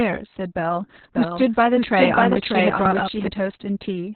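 Throughout, heavy Opus voice compression has squeezed the speech into a narrow 4 kHz band with coarse SILK coding, consistent with roughly 6 kbps, leaving it muffled, hoarse and slightly robotic. From 1.15 s to 3.28 s a doubled audio track appears, likely from a second, slower capture path. A dry copy trails about 0.7 s behind, somewhat quieter, and starts and stops abruptly.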